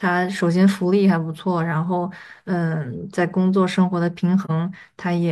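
Speech, with a brief soft-edged dropout from about 4.44 to 4.51 s, near the end. This is AAC frame loss with muting: one frame's worth of audio, roughly 43 ms, is missing and the decoder zeroed its spectrum. The overlapping transform windows fade the sound out and back in.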